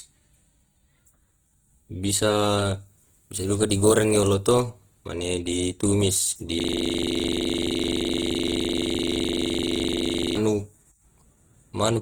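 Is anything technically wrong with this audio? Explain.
Yes, there are two faults.

Throughout the whole clip the speech has a grainy, rough, noisy texture, even though content reaches up to about 20.2 kHz. This is likely Opus compression in its music (CELT) mode, at a low rate near 16 kbps. Short of bits, the encoder fills bands with noise or folded copies of lower bands instead of leaving gaps.

From 6.6 s to 10.37 s the sound turns into a rattling, buzz-like stutter at 23.4 Hz. One 42.67 ms fragment repeats 88 times. This is a system hang loop: the system froze while the audio hardware kept replaying one buffer, which fits a 2048-sample buffer.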